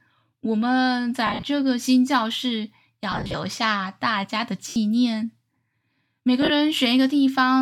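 Around 1.27 to 1.43 s the speech breaks up from lost LE Audio frames: about 120 ms goes missing in short bursts, the longest around 50 ms. The LC3 decoder fills each gap by replaying the last spectrum with scrambled phase, so voiced sound smears into a brief noisy hiss. It happens again at 3.12 to 3.34 s (about 150 ms lost), 4.69 to 4.76 s (70 ms) and 6.42 to 6.50 s (50 ms).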